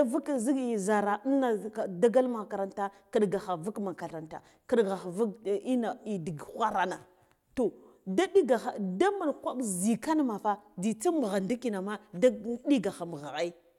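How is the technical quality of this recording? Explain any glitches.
No glitches or faults audible.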